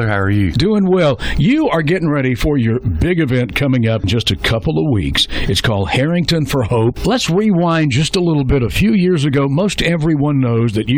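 No technical faults can be heard anywhere in this audio.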